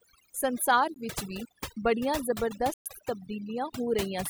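Overdone noise removal runs through the whole of this short speech clip. The noise reducer was pushed so hard that any frequency band sitting near its noise estimate is pulled almost to nothing, and the softer parts of the voice are caught along with the hiss. The background drops to near silence scattered with twinkling specks, while the voice loses its quieter detail along with the noise. A block of digital silence also cuts in twice. At 0.94 s a gap of about 17 ms is heard as a brief dropout. From 2.74 s to 2.86 s, right after "ਵੀ ਬੜੀਆਂ", a 120 ms hole opens. In both places the samples were replaced by zeros with no fade, so the signal drops straight to dead silence and snaps back. That pattern points to output buffers not being filled in time, or to a calculation producing invalid values that were zeroed out.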